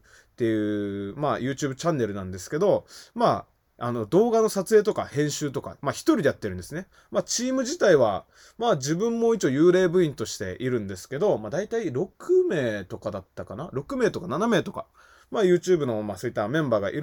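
A short speech recording, with nothing technically wrong to point to anywhere in it. No dropout, distortion or other fault can be heard at any moment.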